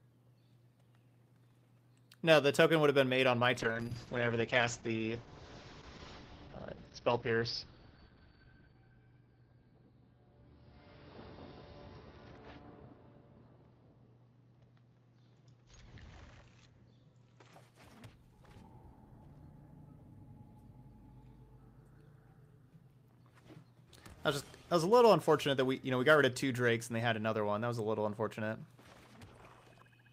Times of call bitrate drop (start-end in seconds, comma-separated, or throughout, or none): 3.61-17.59